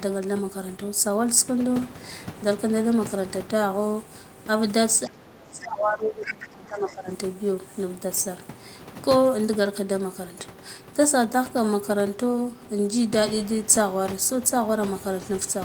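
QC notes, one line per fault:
5.07–7.10 s, speech suppressed in double talk: the talker's level sinks by roughly 25 dB for about two seconds, likely because the echo canceller mistook overlapping far-end talk for echo and attenuated everything. Unlike a plain dropout, it tracks the other side's activity.
6.43–6.48 s and 6.88–6.93 s, other side's voice leaking through: two brief scraps of a second voice appear, about 20 dB and about 25 dB below the talker, likely residual loudspeaker echo the canceller missed. These are added sound, not a loss of the talker.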